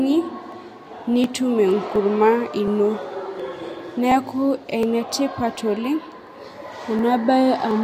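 From 0.52 s to 7.71 s the speech carries a regular click about every 0.72 s, around ten in all. These are likely clock drift buffer slips: two clocks disagreeing by roughly 0.1%, so a few dozen samples get dropped or repeated at each slip.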